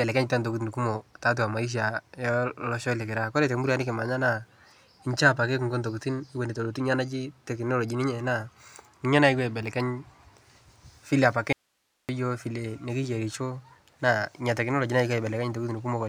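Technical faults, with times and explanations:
11.53–12.09 s: audio dropout to a faint residue. The speech cuts out abruptly for 0.56 s, leaving only faint hiss about 45 dB down, then resumes mid-flow. The hard edges suggest the signal was likely lost upstream while the path after the break stayed live.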